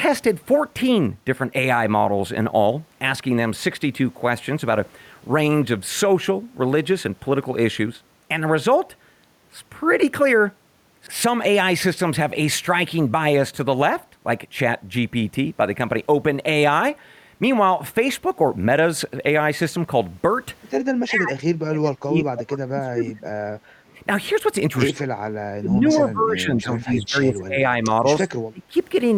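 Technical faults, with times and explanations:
20.95–21.39 s, 21.66–23.23 s, 24.92–25.05 s, 25.59–28.29 s and 28.50–28.75 s: speech suppressed in double talk. The voice itself dips by about 20 to 35 dB, likely because the echo canceller could not tell this talker from loudspeaker echo while the far side played, and turned both down. Unlike gating, the speech is cut, not just the room.
23.81–23.95 s: background gated by the echo canceller. The room sound drops by about 10 dB for roughly 150 ms while the loudspeaker plays, then comes back as the canceller lets go. Only the background is pulled down, briefly, rather than the talker's voice.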